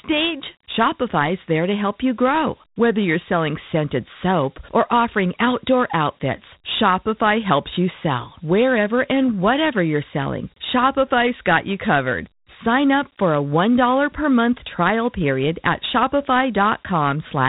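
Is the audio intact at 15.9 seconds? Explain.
No. At 15.9 seconds, as throughout the clip, the speech carries Dialogic VOX ADPCM damage. Each sample is coded as a coarse 4-bit step, which fits about 32 kbps, and nothing sounds above about 3.9 kHz. Unlike plain telephone band-limiting, a gritty hiss rides on the speech itself.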